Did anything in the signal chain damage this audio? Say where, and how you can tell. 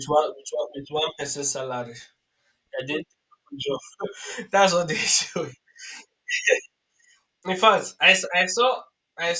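Yes: from 2.8 to 6.4 s the speech carries steady ticks at 10 per second, a resampler restarted on every block. Each 100 ms block's converted edges mismatch, likely in a 44.1 kHz-to-16 kHz converter.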